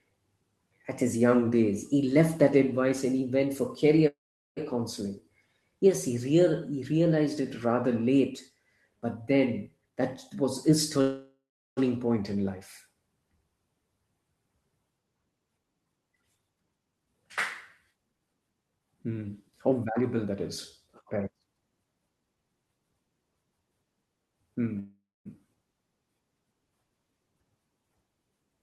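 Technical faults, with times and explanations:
4.07–4.59 s, call audio freeze: right after "and he went for" the sound stops and is bridged for about 0.49 s. The last sound is carried on as a fading buzz and then about 0.42 s of near silence before the audio resumes from where it left off, with nothing lost. The likely cause is delayed packets emptying the jitter buffer, so the receiver had to fill the wait and playback now runs later.
9.78–11.00 s, jitter buffer speed-up: between "but then" and "point in life" the receiver trimmed short pitch-period slices many times in a row to drain an overfull buffer. About 0.3 s is taken out and the sound runs at roughly 122% speed. The pitch stays the same, but the delivery sounds noticeably rushed.
11.01–11.79 s, call audio freeze: just before "point in life" the sound halts for about 0.76 s. The held-over tail fades out, followed by around 0.38 s of silence, and playback then continues seamlessly with nothing missing. 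This fits packets that were likely held up in transit, leaving the receiver to stretch what it had and adding that wait to the delay.
14.90–17.21 s and 17.91–22.37 s, jitter buffer speed-up: two longer stretches where the receiver removes brief pitch-period pieces repeatedly to shrink excess buffered delay. The first runs at about 113% with roughly 0.3 s cut. The second runs at about 115% with roughly 0.7 s cut. Pitch holds steady while the pacing sounds hurried.
24.79–25.27 s, call audio freeze: a gap of about 0.46 s is filled in. The last sound decays, then about 0.25 s is silent before the audio picks up exactly where it stopped. A stalled packet flow likely drained the buffer here too.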